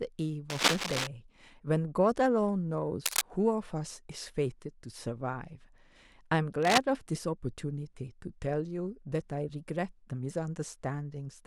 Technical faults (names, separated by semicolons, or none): cable scratch noise